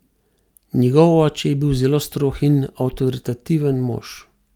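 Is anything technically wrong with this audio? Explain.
No, nothing is technically wrong.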